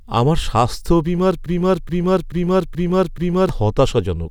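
Right after "আমার স্বাস্থ্য বীমার", at 1.46 s, the speech falls into a broken-record loop: a chunk of about 0.43 s plays five times back to back, identical each pass, until 3.49 s. That's roughly two seconds of stutter, and whatever should have been said in that stretch is simply gone. The likely cause is the player, encoder or stream stalling and repeatedly sending the last fragment it was holding instead of fresh audio.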